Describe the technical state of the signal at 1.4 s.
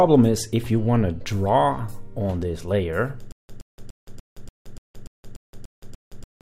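Around 1.4 s the signal is intact, with nothing faulty to be heard at that moment.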